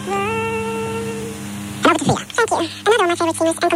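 From start to finish the audio is read two samples at a time, so it plays at double speed and a full octave, 12 semitones, high. Adjacent samples are taken as one frame, as if the stream were stereo or twice as wide.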